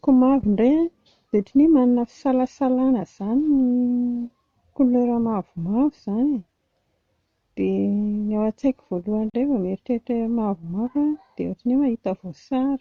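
At 9.30 s the speech drops out for about 41 ms, ending at 9.34 s, with smeared edges before resuming exactly where it stopped. This is a gap at a join of encoded pieces: separately encoded segments were spliced untrimmed, leaving encoder delay and final-frame padding as silence.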